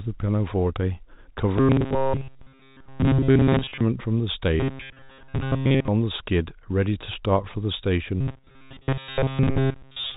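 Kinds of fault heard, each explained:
Robotic sound from repeated short buffers: audio likely arrived too seldom, so stretches about 7.5 ms long were replayed repeatedly, turning most of the speech there into a rigid, metallic 134 Hz buzz.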